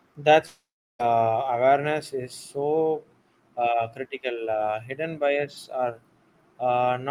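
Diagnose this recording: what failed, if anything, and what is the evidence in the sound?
The speech breaks off at 0.45 s. The last sound carries on as a fading buzz, then gives way to about 0.37 s of silence. Speech returns at 1.01 s, and roughly half a second of it is simply gone. The stage is the network, with a long network dropout the likely cause. No packets arrived for that stretch. The receiver stretched out the final fragment it had, let it decay, and then played nothing until audio resumed.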